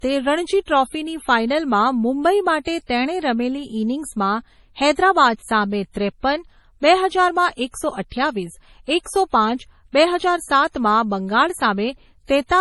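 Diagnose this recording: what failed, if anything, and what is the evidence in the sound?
The codec stage failed. Throughout the speech there is nothing above 11.5 kHz, and the swirly, smeared quality of a heavily squeezed MP3 runs the whole clip, which fits a 32 kbit/s MP3 later re-saved as a 192 kbit/s MP3. This is likely low-bitrate audio saved at a high bitrate. A genuine high-bitrate encode would keep content far above 11.5 kHz and sound clean. Re-encoding can't return what the first pass discarded.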